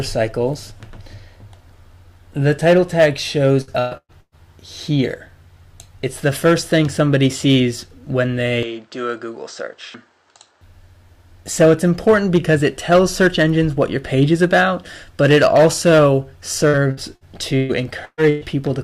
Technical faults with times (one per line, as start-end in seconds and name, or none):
3.61-4.35 repeated packet loss (robotic sound)
8.63-10.61 input switched to a poorer device
16.68-18.44 repeated packet loss (robotic sound)